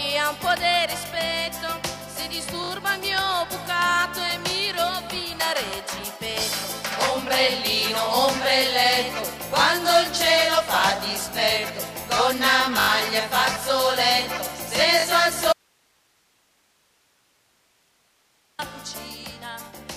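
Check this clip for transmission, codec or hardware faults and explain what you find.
Two kinds of fault are audible: a repeated buffer at three points, and one audio dropout to a faint residue.

The repeated buffer occurs at 2.64 to 2.70 s, 12.80 to 12.88 s and 15.00 to 15.04 s. Each time, a 20 ms block plays again because the next block did not reach the output in time: three extra plays in the first, four in the second, two in the third. The result is a short, buzzy stutter with a hard edge at each repeat. Essentially no audio is lost.

The audio dropout to a faint residue runs from 15.53 to 18.59 s, about 3.06 s. The sound cuts off abruptly, without a fade, and only hiss remains, about 40 dB below the normal level, before the signal returns just as suddenly. The likely cause is a loss of the incoming signal while the downstream chain stayed live and kept passing its own noise floor.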